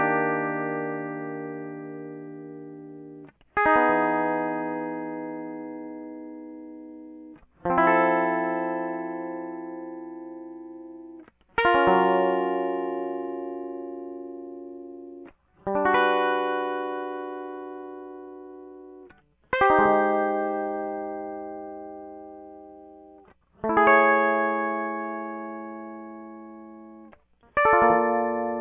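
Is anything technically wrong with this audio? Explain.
No, nothing technically wrong is audible in this music.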